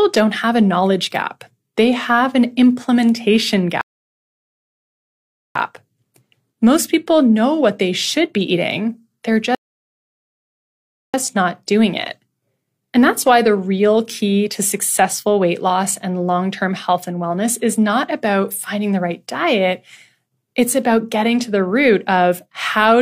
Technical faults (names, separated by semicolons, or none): rebuffering stall